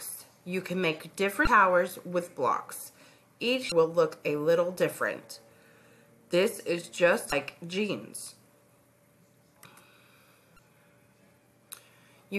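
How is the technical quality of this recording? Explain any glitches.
The recording has two kinds of glitch: brief decoding bursts from damaged compressed data, and a short run of scratch ticks.

Damaged data in a compressed stream, at 1.44–1.47 s, 3.69–3.72 s, 7.29–7.33 s and 10.56–10.59 s: corrupted bytes break a frame, so the decoder loses sync and hunts for the next valid header. Each event is a roughly 30 ms chirp, squawk, click or short hole.

CD scratch ticks, from 8.27 to 9.04 s: a blemish wipes out more data than error correction can restore, once per disc revolution. Four ticks, the longest only around a millisecond, arrive about five per second as the player interpolates or mutes the lost samples.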